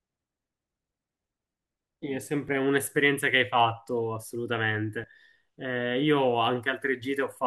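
Speech with two abrupt jumps where the sound skips forward without any gap, a small one at 2.49 s skipping about 10 ms and a larger one at 5.04 s skipping about 40 ms. These are likely dropped buffers (overrun), with audio overwritten before capture collected it.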